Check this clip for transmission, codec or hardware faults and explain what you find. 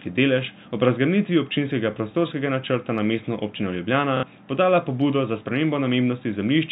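There's one real fault: a short dropout patched by repetition, around 4.17 to 4.23 s. The telephone band limit from G.711 coding, with nothing above 4 kHz, is just the line, not a fault.

At 4.17 s, about 60 ms of audio went missing, and the receiver filled it with packet loss with last packet repeated. It kept replaying the most recent packet until fresh ones arrived, which fits two 30 ms packets being lost. The replayed chunks don't join up with the speech's pitch cycle, so you get a brief buzzy, robotic stutter before normal audio resumes at 4.23 s.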